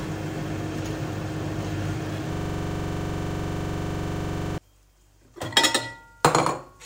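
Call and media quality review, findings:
System hang loop, 2.33–4.58 s: a 42.67 ms slice repeats about fifty times, giving a 23.4 Hz machine-gun stutter. The driver or host froze while hardware recycled the ring buffer, which fits a 2048-sample buffer. Waveform: identical tiled segments. Spectrogram: periodic vertical striping.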